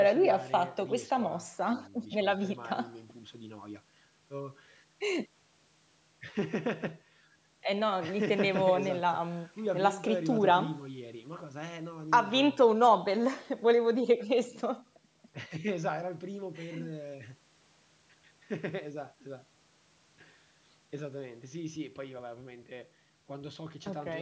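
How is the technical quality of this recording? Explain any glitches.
On listening, nothing in the speech stood out as a technical problem.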